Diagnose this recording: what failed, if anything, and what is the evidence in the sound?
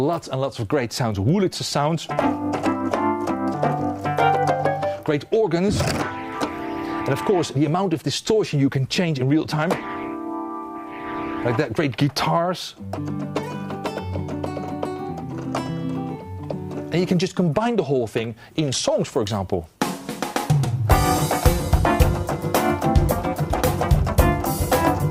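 Nothing failed, and the sound gives no evidence of a fault anywhere in the recording chain.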